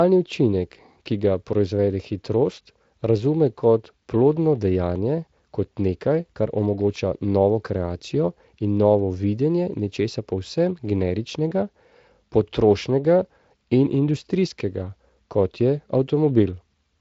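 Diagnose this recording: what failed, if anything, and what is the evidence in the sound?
No stage failed: the speech comes through what sounds like a Speex path, with only light coding texture and a top end stopping near 7.6 kHz, and nothing in the sound points to a fault.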